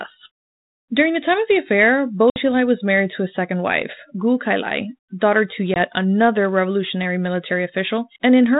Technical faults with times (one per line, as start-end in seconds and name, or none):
2.30-2.40 packet loss on an ADPCM call
5.74-5.77 packet loss on an ADPCM call